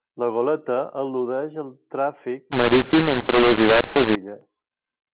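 From 2.52 to 4.15 s the speech turns harsh and gritty: a mu-law and A-law mix-up, where mu-law telephone samples get decoded as A-law. Levels come out scrambled, some too loud and some too soft, and quiet gaps fill with hiss.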